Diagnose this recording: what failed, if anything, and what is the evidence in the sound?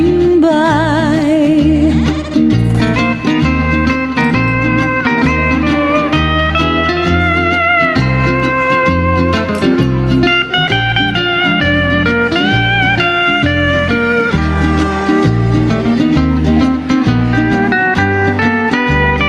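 Gain pumping runs through the whole clip. The gain swings by around 10 dB. Loud and soft parts sit squashed close together in level. The likely cause is a fast limiter or compressor in the processing stage, clamping down on every peak because the input gain ahead of it is set far too hot for the microphone.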